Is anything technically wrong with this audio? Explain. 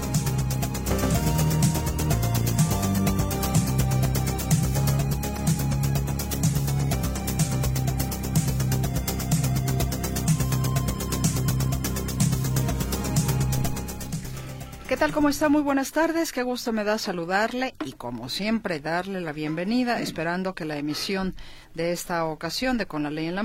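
No, nothing in this audio stood out as a technical problem on listening.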